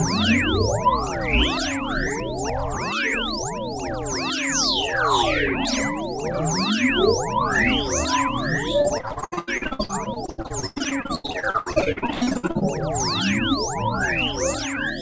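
From 8.82 to 12.63 s, packets kept arriving late or not at all, and each hole was patched by stretching the preceding sound. This repeated packet loss conceals nearly half the span, with gaps up to 99 ms, leaving choppy, robotic sound with pieces missing.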